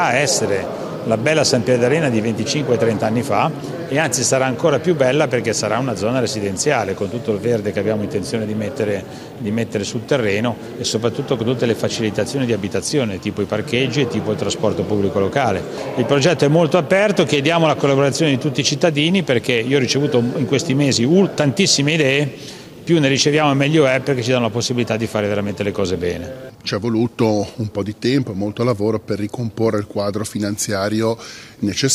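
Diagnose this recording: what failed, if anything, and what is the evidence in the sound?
Nothing failed: no stage in the chain, from analogue wiring through conversion, buffering, network and playback, leaves any audible evidence of a fault.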